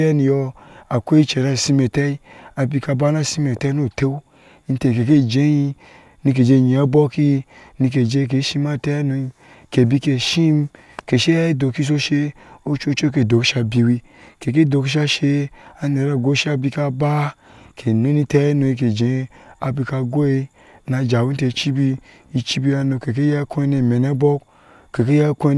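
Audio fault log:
Nothing in the speech stood out as a problem on listening.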